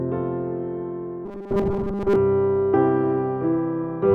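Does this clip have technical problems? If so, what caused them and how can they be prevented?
Yes. From 1.25 to 2.16 s there is robotic sound from repeated short buffers, a rigid metallic buzz at 200 Hz. Around 70% of that span is likely a 5 ms buffer replayed while fresh audio was late. Larger jitter buffers or priority-scheduled audio threads prevent it.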